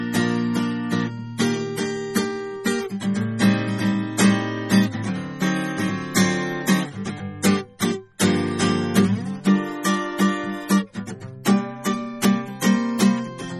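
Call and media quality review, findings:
Low-bitrate audio saved at a high bitrate, throughout the music. Symptom: dull, swirly top end with smeared transients, and nothing above 16.6 kHz. Spectrogram: a hard flat ceiling at 16.6 kHz for the whole length, with patchy, blocky energy beneath it. Likely component: an MP3 encode at a very low rate, around 32 kbit/s, later re-saved at around 320 kbit/s. The second pass cannot restore the discarded detail, so the first encode's damage remains.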